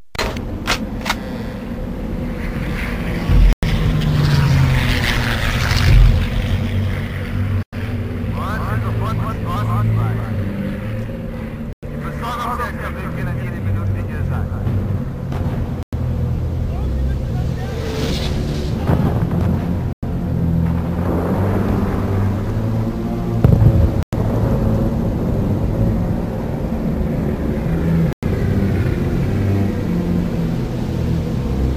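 Seven hard-edged silences of 100 ms each break the sound at 3.53, 7.63, 11.73, 15.83, 19.93, 24.03 and 28.13 s. This is a gap between chunks: the audio was joined in 4 s pieces with empty time inserted at each seam, so nothing is missing but the flow stops abruptly. A waveform shows flat near-silent strips with sheer vertical edges; a spectrogram shows blank full-height columns at steady 4.1 s spacing.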